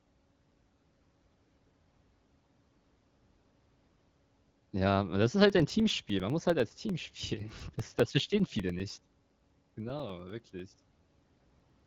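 From 5.50 s, right after "aber das ist", until 11.80 s, the speech is peppered with periodic USB or driver dropouts. Every 0.1 s something stalls the audio path and roughly 2 ms of sound goes missing, replaced by silence. That's about seventy small gaps, heard as a steady ten-per-second ticking that rides along only while there's speech. The AMR-WB wideband coding with its cap near 7.6 kHz plays no part in these clicks.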